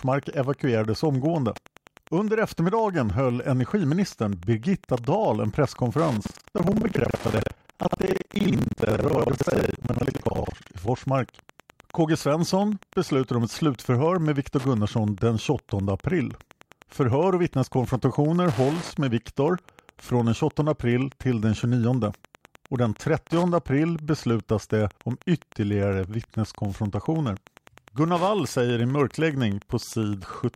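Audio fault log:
throughout, Wi-Fi interference: A nearby Wi-Fi radio's transmissions are being picked up and rectified by the audio circuit, so its beacon every 102.4 ms comes through as a steady tick about ten times a second, sitting around 25 dB below the speech.
6.22–10.75 s, buffer tearing: The writing program and the hardware reader of the ring buffer have drifted until they cross inside each period. Roughly two fifths of every buffer replays audio about a tenth of a second old, hard-joined on both sides, giving a robotic 21.5 Hz buzz that fits a 2048-sample buffer.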